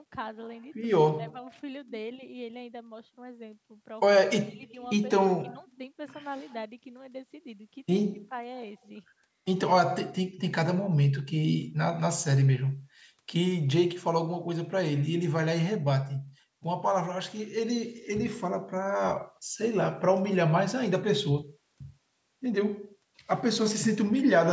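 No technical faults are audible.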